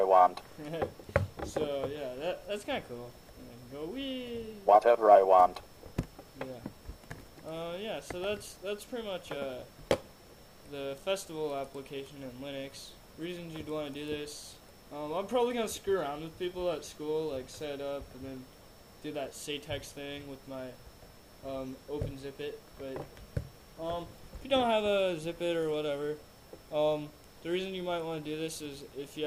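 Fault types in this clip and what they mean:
No fault types are present in this clip.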